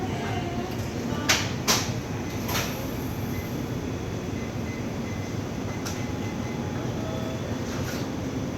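There are no technical faults in the sound to describe in time order.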